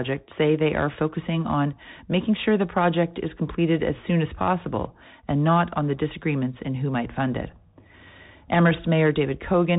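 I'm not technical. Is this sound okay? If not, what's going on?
No. Throughout the speech, from start to finish, it sounds thin and boxed-in, like an old phone call, with a grainy hiss underneath and scratchy s sounds. That comes from the Bluetooth CVSD headset codec, a simple system some wireless headsets use for calls. It saves space by describing the sound only in tiny up-or-down steps, which adds roughness on sharp sounds, and it drops everything above about 3.8 kHz, where crispness lives.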